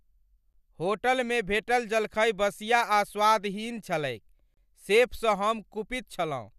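Speech clip with a gap at a join of encoded pieces, twice. A short dropout of about 12 ms hits at 0.53 s, then a longer one of 32 ms from 4.54 to 4.57 s, four seconds apart. Each time the sound breaks and resumes where it left off, edges smeared. That points to separately encoded four-second chunks joined without trimming the encoder's start delay and last-frame padding, so that silence ends up in the stream.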